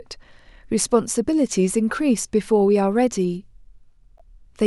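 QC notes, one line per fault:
4.18–4.21 s, corrupt frame decoded: a short, low-level glitch near the end of the speech, lasting about 36 ms, which matches a single damaged compressed frame. Flipped bits in that frame led the decoder to apply wrong gains or misread spectral codes, so energy landed at frequencies unrelated to the surrounding speech. The result is an odd, brief artefact, fairly quiet at around -40 dBFS, confined to the span of that one frame.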